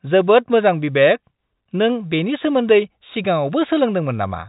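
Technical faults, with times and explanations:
No technical faults can be heard in the speech. The G.711 telephone coding is audible as the usual narrow band with nothing above 4 kHz, and any quantisation noise riding on the signal is faint at most.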